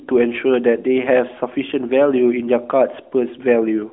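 No faults found: the speech comes through the AMR-NB mobile codec at 12.2 kbps, confined to the expected telephone band of about 250 Hz to 3.6 kHz with nothing above 3.8 kHz.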